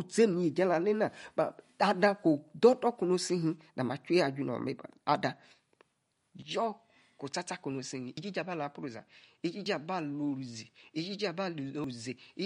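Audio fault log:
Throughout: MP3 compression. The speech sounds watery and swirly, with a metallic edge on s sounds and softened attacks. This points to a low bitrate around 48 kbps, likely starving the encoder so it cuts treble and zeroes weak frequency lines.
6.42 to end: input switched to a poorer device. From 6.42 s the sound turns duller and boxier, drops about 5 dB in level and gains a faint new noise floor well below the speech, with no gap at the change. This likely reflects a narrower-band microphone taking over.
8.17, 9.66, 11.84: dropped buffer (overrun). At each point the speech jumps abruptly forward with no silence. The first two lose roughly 50 ms, the last roughly 150 ms. The program likely fell behind, so those samples were overwritten and the surrounding audio was spliced directly together.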